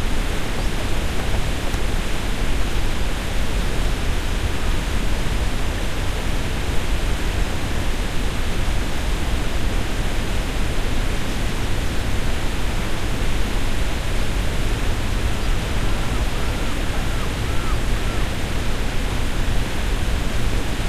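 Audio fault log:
No faults heard in this recording.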